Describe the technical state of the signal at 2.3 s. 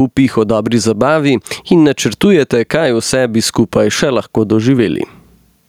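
At 2.3 s the speech shows gain pumping, present across the whole clip: the background swells between syllables and ducks by around 10 dB under each loud sound, likely from a fast limiter riding excessive input gain. Unlike a noise gate, the background never cuts off completely.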